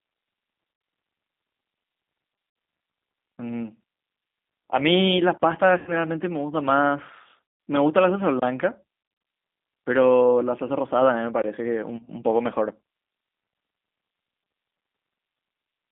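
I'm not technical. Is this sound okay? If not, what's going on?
No. The call ran through the G.729 codec, a low-rate phone codec that rebuilds speech from a simple model of the voice. Everything above about 3.7 kHz is cut off, so the whole clip sounds muffled, slightly rough and synthetic.

There is also VoIP packet loss concealed by the speech codec. Pieces of the signal went missing, and the decoder filled each hole by stretching the last bit of sound and letting it fade. This happens at 0.74–0.84, 2.50–2.56, 5.78–5.91, 7.47–7.60, 9.03–9.27 and 11.97–12.10 s, where the sound turns buzzy or smeared and stays weak briefly afterward.

Finally, there is a gap between chunks. The audio was handled in pieces about 3 seconds long, with a short silence left at each join. You hear three tiny hard-edged dropouts of about 21 ms each, at 5.38, 8.40 and 11.42 s.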